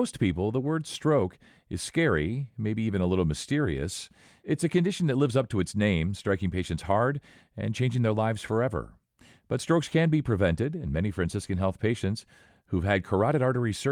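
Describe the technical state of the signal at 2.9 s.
At 2.9 s the signal is intact, with no audible technical fault at that point in the speech.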